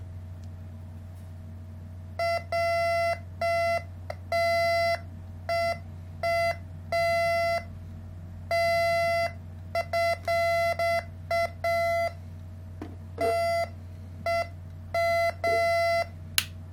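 A recording of everyday sounds carries crude rate conversion throughout, with a gritty, inharmonic fizz riding on loud and bright moments, which fits samples being repeated to stretch 44.1 kHz audio to 48 kHz. A spectrogram would show spurious mirrored tones roughly 25 dB down.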